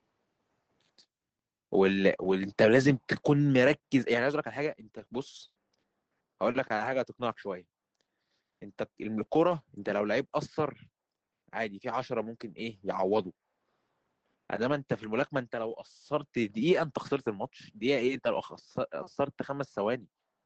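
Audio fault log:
4.99–5.93 s, repeated packet loss (robotic sound): The sound turns choppy. Five separate holes open in under a second, the longest 100 ms. Each is bridged by stretching the last sound, about 180 ms in all, roughly a fifth of the stretch.
6.49 s, lost packet rebuilt from error correction: A single 20 ms packet went missing. The next packet carried a low-bitrate Opus copy of it, so no gap is heard. Instead a brief patch sounds rougher and noisier than its surroundings.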